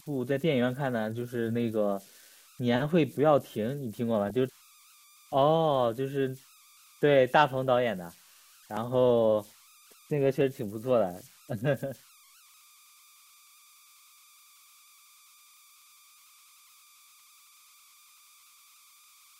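A faint whistle near 1 kHz, sitting about 30 dB below the speech, runs throughout, with grainy texture under quiet passages. These are converter idle tones: an undithered delta-sigma converter settles into repeating bit patterns at low input levels, and those patterns form this steady pitch.

From 4.27 to 4.36 s, and again briefly at 7.67 s, the speech picks up short blips of noise in single frequency bands. This is DAB burbling: bit errors from weak reception slipped past error correction and corrupted the MP2 sub-band samples for a few frames.

At 8.77 s and 10.41 s there is an abrupt jump forward, with no gap of silence, each losing around 20 ms of audio. The likely cause is a dropped buffer (overrun): the hardware overwrote samples before the program collected them, and the surrounding audio was spliced directly together.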